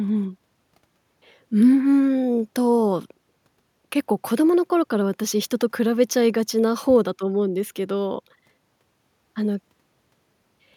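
No technical faults can be heard anywhere in the recording.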